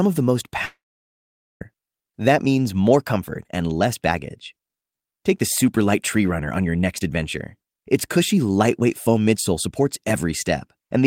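A likely long network dropout interrupted this speech recording from 0.65 to 1.63 s. About 0.96 s of audio never arrived, so the receiver stretched the last sound into a brief fading buzz, then about 0.83 s of silence, before speech resumed without the lost part.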